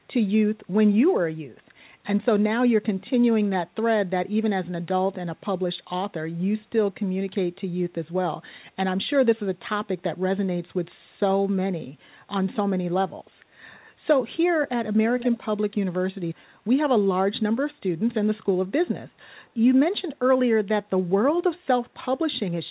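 From 15.18 to 15.45 s, a faint copy of the speech returns 445 ms late. The likely cause is an echo leak past a loudspeaker's echo canceller.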